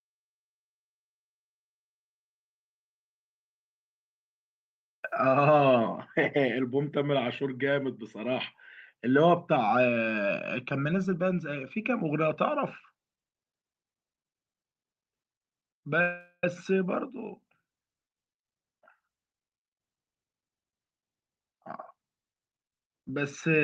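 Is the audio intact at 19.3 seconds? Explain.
No. At 19.3 s the sound sits inside a jitter buffer speed-up running from 18.25 to 20.45 s. The receiver had built up more delay than its target, so it cut many short pitch-period-sized pieces in quick succession, removing roughly a fifth of a second and playing that stretch about 110% fast. It sounds briefly hurried, but the pitch holds steady. That sets it apart from a simple playback-rate change, which would raise the pitch, and from dropouts, which leave audible gaps.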